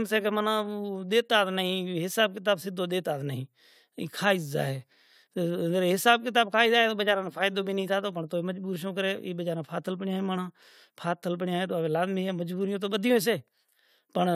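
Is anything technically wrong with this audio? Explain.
No, nothing technically wrong can be heard in this speech recording. No fault shows up anywhere in it.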